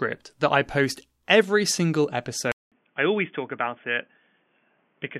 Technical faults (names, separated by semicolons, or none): input switched to a poorer device